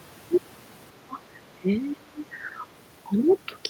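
Speech, with the talker's level dropping in three places. From 1.07 to 1.19 s it falls by around 20 dB. From 1.6 to 2.22 s it dips harder, by roughly 25 dB, for about half a second in all. From 2.51 to 2.62 s the dip is slight. This is likely speech suppressed in double talk. The echo canceller apparently heard both sides at once and turned the near talker down along with the echo.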